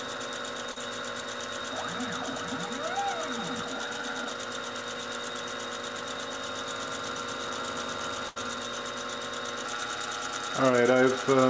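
At 0.72 to 0.78 s, and again at 10.72 to 10.75 s, there is short concealed packet loss. A few hundredths of a second of audio arrived too late, and the receiver extended the preceding sound to cover the gap, leaving a brief smear or wobble. At 8.28 to 8.38 s, a burst of packet loss removed roughly 80 ms. Concealment stretched the last sound into a fading buzz or hiss, and playback resumed after the missing stretch. Throughout, the call path carries nothing above 8 kHz, which fits a 64 kbps G.722 link.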